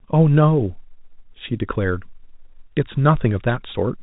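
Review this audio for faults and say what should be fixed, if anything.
No faults; nothing needs fixing.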